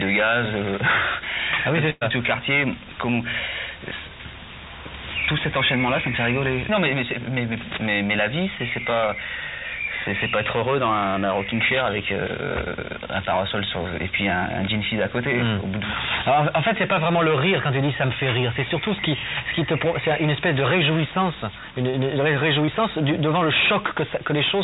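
A burst of packet loss at 1.90 to 2.03 s: about 120 ms never arrived, so the receiver stretched the last sound into a fading tail before the audio jumps ahead. Short concealed packet loss follows at 9.07 to 9.10 s, 21.90 to 21.95 s and 22.65 to 22.69 s, each a brief smear where tens of milliseconds were patched by extending the preceding sound. Throughout, nothing reaches above 4 kHz, which fits the narrowband G.711 call path.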